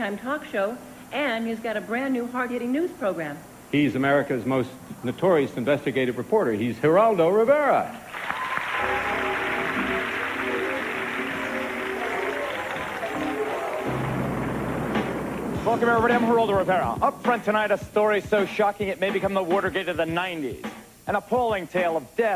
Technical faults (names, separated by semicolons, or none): none